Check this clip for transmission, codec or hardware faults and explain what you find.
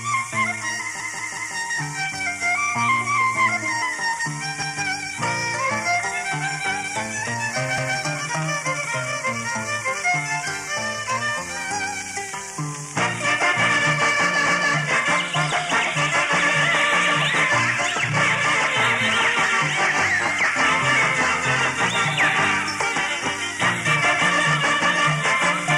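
The clip has repeated frames. A short block of compressed audio is played again at 1.00 s (three extra times, adding about 0.56 s), at 4.62 s and 7.78 s (once each, 186 ms blocks), and at 14.47 s (once, a 279 ms block, which fits three frames). Each repeat is heard as a stutter. On a waveform and spectrogram, identical segments sit side by side.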